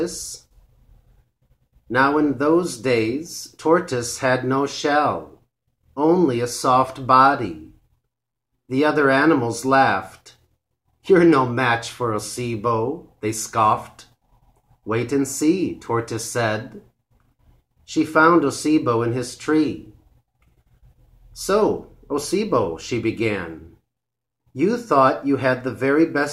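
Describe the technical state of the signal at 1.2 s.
At 1.2 s the signal is intact, with no audible fault at that moment.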